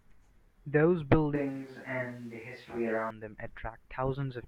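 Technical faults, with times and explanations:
1.36–3.10 s: switch to a distant microphone. The speech abruptly turns roomy, hollow and thin in the bass. The level holds steady. Room noise sits roughly 30 dB below the speech. A farther microphone likely took over, then the close one returned.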